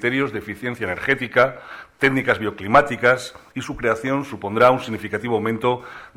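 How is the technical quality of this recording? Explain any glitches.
The quality is let down by one fault that runs through the whole recording. Computer activity noise sits under the sound from start to finish. It is a faint buzzing chirp, pulsing at around 500 Hz. It stays roughly 45 dB below the signal. The processor, graphics card or mouse draws changing current. Those load changes disturb the ground shared with the audio circuit. So the noise follows the computer's activity, not the sound being recorded.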